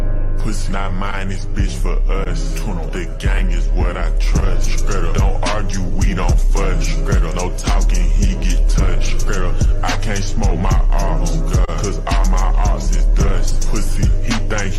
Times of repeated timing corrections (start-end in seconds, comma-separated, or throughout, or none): 1.49-14.73